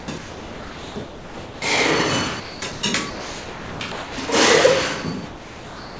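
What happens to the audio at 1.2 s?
Sound chopped by the voice detector runs from the start of the clip to 1.62 s, so 1.2 s falls inside it. The sender's voice activity detection was likely switching transmission on and off repeatedly, and about 1.4 s of that opening stretch was filled with synthetic comfort noise. The result is choppy, with two or more holes where the sound was replaced. Throughout, nothing is heard above 8 kHz, consistent with a G.722 call path.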